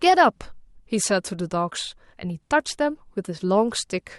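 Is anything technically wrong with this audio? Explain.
No, there is nothing technically wrong with this audio.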